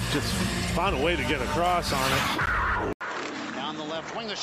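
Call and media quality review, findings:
Corrupt frame decoded, 0.62–0.68 s and 2.46–2.48 s: short chirp/noise bursts, the first peaking around -20 dBFS and the second around -15 dBFS, spanning what sounds like two and three codec frames. Decoder played bit-damaged frames. Spectrogram shows brief broadband smears at wrong frequencies, with spikes on the waveform.

Input switched to a poorer device, 2.93 s to end: 80 ms dropout, then sound turns duller and about 10 dB quieter, with nothing above 7.7 kHz and a new noise floor about 50 dB down. Likely cause is a mid-call switch to a lower-grade microphone or headset profile. Spectrogram shows a hard ceiling at 7.7 kHz, and the waveform shows a gap followed by a smaller envelope.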